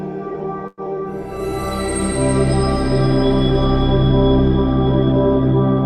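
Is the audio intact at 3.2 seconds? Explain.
Yes, the audio at 3.2 seconds is intact, with no dropout, click, distortion or other fault at that moment.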